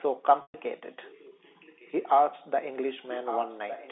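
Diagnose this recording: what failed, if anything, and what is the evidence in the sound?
Packet loss with pitch repetition, at the network stage, occurs from 0.42 to 0.54 s. About 120 ms went missing, which fits roughly six 20 ms packets. The receiver repeated the last pitch period as a held buzz, faded it to silence over about 50 ms, then cross-faded back into the sound.

Echo leak in call processing is heard twice as a delayed copy of the sound, 1.16 s behind. It appears faintly, at about 25 dB down, from 1.02 to 1.92 s, and more clearly, at about 10 dB down, from 3.1 s to the end. The likely cause is a loudspeaker on one side whose echo canceller left residual pickup that was sent back.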